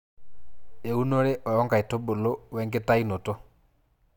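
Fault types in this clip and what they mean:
None: no technical fault can be heard anywhere in the signal.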